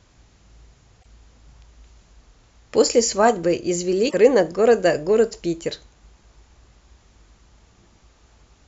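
At 0.98 s there's a short burst of damaged data in the compressed stream, lasting about 80 ms until 1.06 s, and the same thing happens again from 4.06 to 4.15 s. In both spots the decoder hits frames it can't read properly, loses its lock on the stream, and has to hunt for the next valid frame header. You hear that as a quick glitch cutting across the speech.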